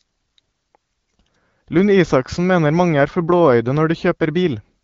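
Nothing stood out on listening; the speech passes through AMR wideband (HD Voice) coding at 12.65 kbit/s, a rate at which that codec holds speech clear.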